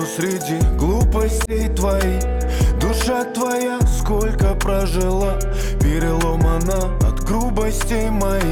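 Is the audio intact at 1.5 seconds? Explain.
No, a corrupt frame was decoded from 1.45 to 1.53 s: flipped bits in a single frame put energy at wrong frequencies, causing a loud chirp-like burst.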